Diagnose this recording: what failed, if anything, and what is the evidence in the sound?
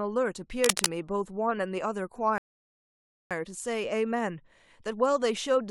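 Cable scratch noise, 0.64 to 0.86 s: dense, irregular crackling and rustling sits over the speech for about a fifth of a second, peaking roughly 5 dB above the speech itself. The bursts are uneven and broadband rather than a steady hiss or a single click. The likely cause is at the analogue wiring stage: a worn cable, plug or control being moved, so its contact resistance fluctuates rapidly and injects noise into the signal.

Rebuffering stall, 2.38 to 3.31 s: the speech drops to silence for about 0.93 s and then resumes exactly where it stopped. No syllables are lost and nothing jumps ahead, so the gap adds time rather than removing audio. That points to the playback buffer on the network side. The player drained its downloaded audio, paused until more data arrived, then carried on from the same point.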